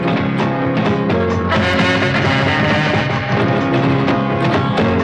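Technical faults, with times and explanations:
1.74–4.12 s, doubled audio track: a dry, full-band copy snaps in trailing about 150 ms behind, some 5 dB quieter, likely from a second, slower capture path.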